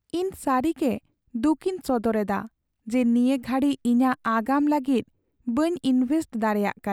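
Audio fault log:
No fault is heard in this speech clip.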